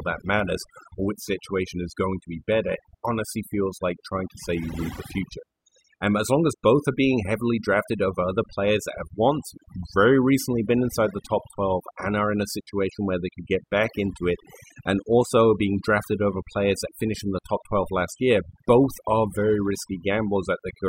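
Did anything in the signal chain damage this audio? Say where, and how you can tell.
Yes, and it happened in the processing stage rather than in wiring, conversion or transport. This is speech with overdone noise removal running from start to finish. Between phrases the background drops to near silence, breaking up into little twinkling, warbling specks where the noise used to be. The denoiser was set too hard, so any band sitting close to its noise estimate got pushed down or switched off, taking the quieter parts of the voice with it.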